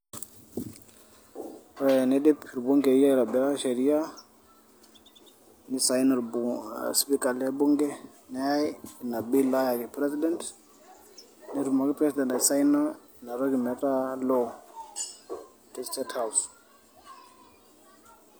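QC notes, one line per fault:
No technical faults are audible in this speech recording; the signal holds steady from its first moment to its last.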